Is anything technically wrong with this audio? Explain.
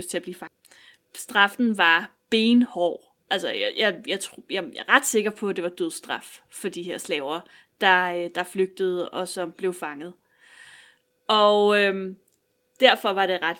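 Yes. Speech is affected by two faults.

At about 0.47 s there is a skip ahead: roughly 0.4 s of audio was discarded while later audio was already queued, and playback jumps straight on with nothing filled in. Unlike a dropout, there is no silence or concealment at the join, only an abrupt splice.

From 1.05 to 2.16 s a jitter buffer speed-up runs at 104%. The overfull buffer trimmed many tiny pitch-period-sized pieces, around 50 ms in all, so the speech runs slightly faster. Unlike a resampling speed change, the pitch stays the same.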